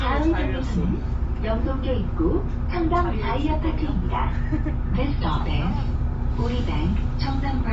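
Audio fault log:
Throughout: likely Bluetooth LC3 compression. Nothing above 7.7 kHz, with a grainy, noise-filled upper band in 10 ms frames. That texture, unlike a clean low-pass, fits roughly 32 kbps.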